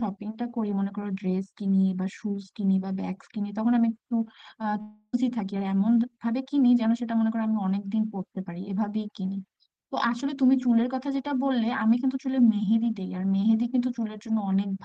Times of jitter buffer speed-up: 5.22-6.33

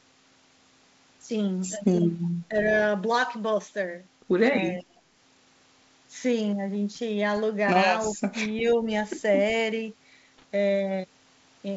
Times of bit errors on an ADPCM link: 10.38-10.43

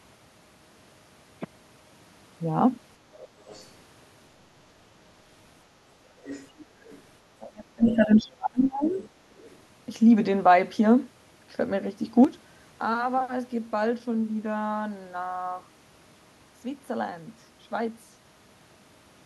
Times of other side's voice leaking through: 3.21-3.68, 6.23-7.01, 7.90-7.96, 8.87-9.08, 9.41-9.57

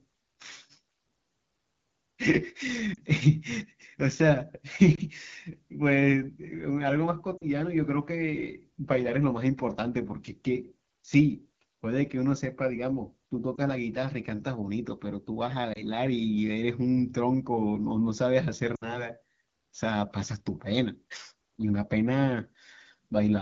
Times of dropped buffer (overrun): none

